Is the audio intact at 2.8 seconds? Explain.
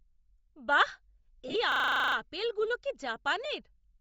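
No. At 2.8 s the speech carries Bluetooth LC3 compression damage that runs through the whole clip: a breathy, grainy upper band where the transform codec has zeroed detail and filled it with noise, likely from a low bitrate near 32 kbps. Unlike a plain low-pass, the top isn't simply missing; noise-fill keeps it hissy and synthetic.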